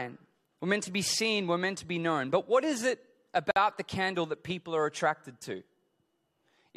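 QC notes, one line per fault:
3.51 to 3.56 s, gap at a join of encoded pieces: the speech drops out for about 52 ms just before "the candle that people", then picks up right where it left off. Two separately encoded chunks were butted together untrimmed, so encoder delay and end padding sit there as silence with smeared edges.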